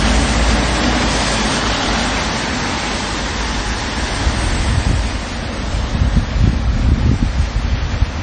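From start to finish the audio carries heavy MP3 compression damage, most likely from encoding at a very low bitrate, on the order of 32 kbps. Nothing remains above 10 kHz, so the top end is cut flat. With so few bits, the encoder discards weak frequency components and lets others flicker in and out between frames. The result is a watery, swirling texture with metallic chirps on bright, noisy content and softened, smeared transients.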